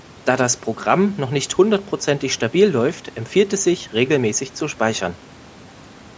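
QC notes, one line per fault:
Nothing stood out on listening to the speech.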